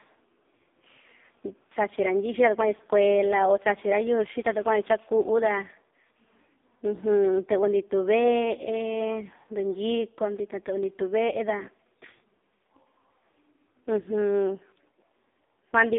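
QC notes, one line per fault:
Throughout: AMR narrowband mobile codec, speech squeezed into 250 Hz to 3.7 kHz and heavily buzzy and synthetic, which fits one of the lowest AMR-NB bitrates, around 5 kbps.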